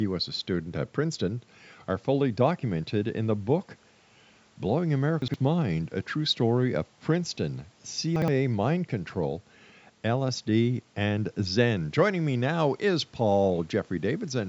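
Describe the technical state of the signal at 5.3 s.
At 5.3 s you're inside a spot of chunks out of order, running from about 5.22 to 5.34 s. A 60 ms chunk landed one slot late, so it plays after its neighbour instead of before it. Nothing's missing, but the speech jumbles briefly across the hard joins.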